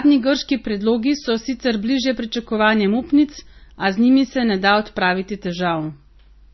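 Throughout, the speech sounds dull, with the artefacts of different codecs heard together and nothing above about 5.9 kHz. This is likely transcoding between lossy codecs, fitting a low-bitrate MP3 re-encoded as WMA.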